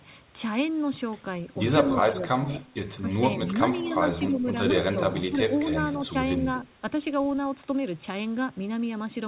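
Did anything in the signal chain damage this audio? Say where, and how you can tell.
Yes, in the call processing stage. The level dips at 1.84–2.65 s, 3.01–3.96 s, 4.27–4.44 s and 4.92–5.41 s, by up to about 15 dB. That's speech suppressed in double talk, likely the echo canceller ducking this talker while the far side spoke too.

There's also an echo leak: brief, faint scraps at 3.89–3.94 s and 4.38–4.46 s, a copy trailing the speech by 234 ms and sitting about 20 to 30 dB below it. The likely cause is a speakerphone canceller passing residue back down the line.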